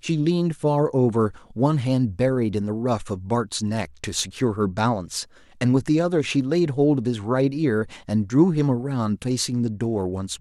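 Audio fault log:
3.60–5.20 s and 9.31–10.41 s, Bluetooth SBC bit pool drop: the speech turns dull and muffled, losing its crisp consonant edges, while a gritty, grainy noise rides underneath until the clarity snaps back. The sound fits a congested wireless link where the sender cut the SBC bit pool from about 28 to 13, near 102 kbps. With so few bits, the highest sub-bands are starved and the rest are coarsely quantised, which removes treble and adds granular distortion.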